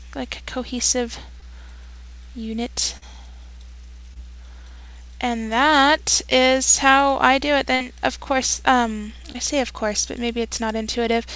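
Packets arrived too late at 1.40–1.43, 2.97–3.04 and 4.14–4.17 s, each a short concealed packet loss: the receiver extended the preceding sound, leaving a brief smear or wobble.

At 7.75–7.82 s a burst of packet loss left about 50 ms to fill. The receiver stretched the last sound as a fading buzz or hiss, then resumed 60 ms further on.

Another short concealed packet loss at 9.32–9.36 s smears the sound briefly. Throughout, nothing above 8 kHz is present, which fits a 64 kbps G.722 call path.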